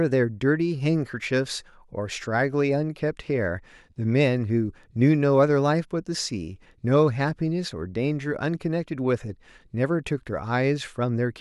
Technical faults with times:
none

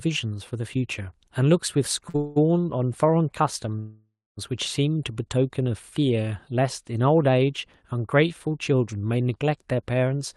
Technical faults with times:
2.09-2.16 short stall from a late packet
2.16-2.38 call audio freeze
3.79-4.39 call audio freeze

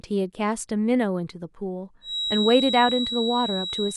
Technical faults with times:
2.00-3.96 feedback whistle

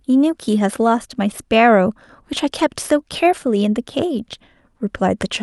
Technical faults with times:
none

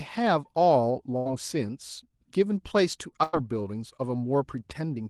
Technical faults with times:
1.17-1.27 burst of packet loss
3.23-3.35 burst of packet loss

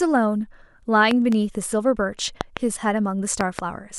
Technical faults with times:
1.11-1.34 loud pop
2.41-2.59 loud pop
3.41-3.61 loud pop

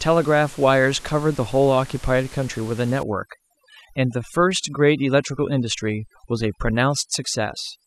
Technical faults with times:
3.03-7.86 overdone noise removal

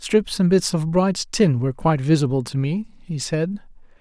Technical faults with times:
none

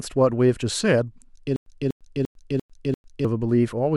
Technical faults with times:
1.56-3.25 stutter with silent gaps

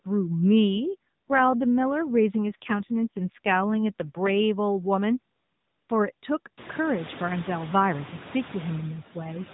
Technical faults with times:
0.00-9.54 noise suppressor artifacts
0.75-4.44 AMR rate drop

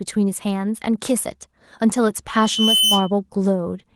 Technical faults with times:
2.33-3.11 loudspeaker feedback squeal

